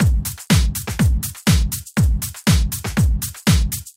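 From 0.85 s to 1.39 s the sound abruptly runs fast and sharp, about 5.8% quicker and roughly 97 cents higher, close to a full semitone, before dropping back to normal speed and pitch at the end of that half-second stretch. This is likely a drift correction step: software keeping two clocks aligned changed the playback rate in a single jump to manage its buffer, so tempo and pitch moved together, then returned.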